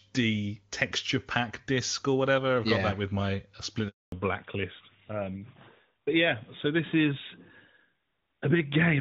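At 3.88 s the speech cuts out in a handover gap. The call is being moved from one network link to another, and no speech frames arrive during the switch. The sound falls away within a few tens of milliseconds and stays silent for 240 ms, until the new link starts carrying audio at 4.12 s. Whatever was said in that window is gone, not muffled, so the gap reads as a clean dropout rather than noise.

From 4.12 s to the end, the call shows a fallback to narrowband. Before the gap, the HD Voice path sounds clear with little or no coding damage, which fits a high AMR-WB rate around 23.85 kbit/s. After the handover, everything above 4 kHz is missing, pointing to the older AMR-NB codec at about 12.2 kbit/s. Sibilants and breath lose their crispness, and the speech sounds duller, boxier and rougher than in the first four seconds.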